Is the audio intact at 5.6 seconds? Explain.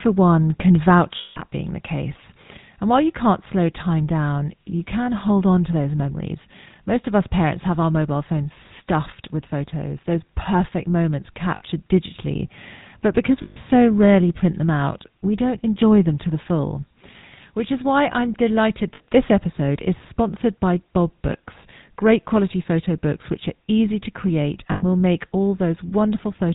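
No. At 5.6 seconds, as through the whole speech clip, the GSM full-rate codec is plainly audible. This codec rebuilds the voice from a vocal-tract model excited by regularly spaced pulses, which fits the 13 kbps GSM full-rate scheme. Speech sounds buzzy and gravelly, with a harsh, rasping edge. On a spectrogram everything stops at a flat ceiling near 4 kHz, and the waveform looks coarse and pulse-driven.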